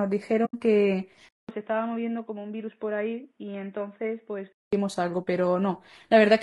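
The whole speech clip carries low-delay AAC compression, likely AAC-ELD as used in video calls. The damage is plainly audible. Short frames resolve the voice's harmonics poorly. Speech sounds rough and grainy, with noise between harmonics. The sound points to a low bitrate near 32 kbps.

From 0.45 to 0.55 s there is AAC frame loss with muting. The decoder zeroed the missing spectrum. About 80 ms of sound is gone, which fits roughly four lost frames. Overlapping windows fade the sound out and back in. It is a soft hole without a sharp edge.

At 1.29 s the input switched to a poorer device, likely another microphone or a headset profile. About 200 ms of silence marks the switch. Then nothing remains above 3.8 kHz, so the voice turns dull and boxy. The level drops by around 10 dB. A new noise floor sits far below the speech. The poorer sound lasts until 4.73 s.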